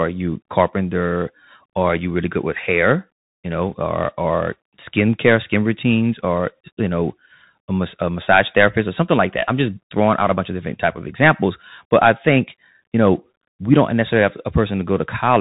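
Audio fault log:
Throughout: Bluetooth CVSD headset codec. The speech is cut off sharply at about 3.8 kHz, which gives it the narrow, boxed-in headset sound. Each sample is coded as a single up-or-down step whose size adapts, which fits a 64 kbps CVSD stream. Loud, bright passages change faster than the step can follow and distort, s sounds come out scratchy, and a granular hiss sits under the voice. The damage is plainly audible.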